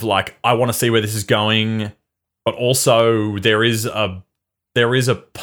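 A couple of samples have likely gone missing from the stream of this speech clip at 3.00 s, between "this is going but" and "there is a". These are dropped samples: the waveform jumps straight from one value to a later one, a gap of only a tiny fraction of a millisecond. That is far too brief to remove any audible sound, so it is heard as a single sharp click, a thin vertical line across the spectrum.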